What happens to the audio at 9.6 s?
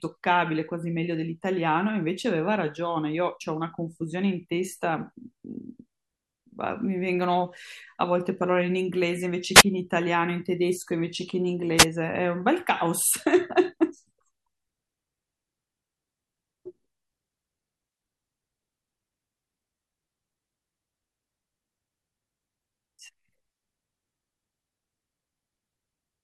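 A wireless microphone noise hit occurs from 9.54 to 9.63 s, lasting about 85 ms. The radio link from the analogue FM microphone briefly fades as reflected signals cancel, so receiver noise rises over the speech and is heard as a short swish of static.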